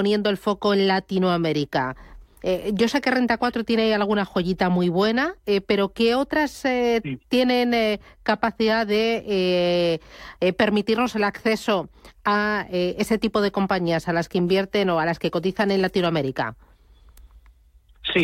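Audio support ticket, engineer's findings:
No audible faults found in the speech recording. Nothing heard that points to a failing component anywhere in the signal chain.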